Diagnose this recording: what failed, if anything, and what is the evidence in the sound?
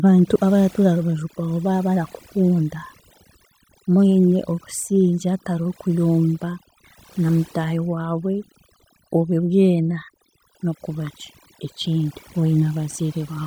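Overdone noise removal in the call processing stage runs through the whole speech clip. Between phrases the background drops to near silence dotted with brief twinkling specks. The suppressor has been set too hard: any frequency band close to its noise estimate is pulled far down or shut off, so quiet parts of the voice vanish with the noise. The telltale is that the damage tracks level, leaving a hollowed-out background, rather than the band-limited, smeared texture of a starved codec.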